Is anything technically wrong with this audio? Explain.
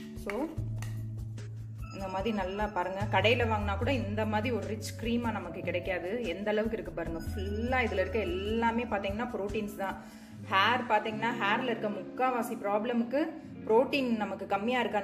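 No, nothing technically wrong turns up anywhere in this one, so there's nothing to flag.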